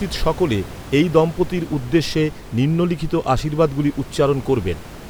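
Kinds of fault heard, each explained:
Nothing stood out on listening to this speech; the only background sound is room noise sitting about 17 dB below the voice.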